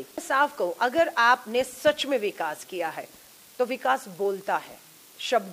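No technical faults detected.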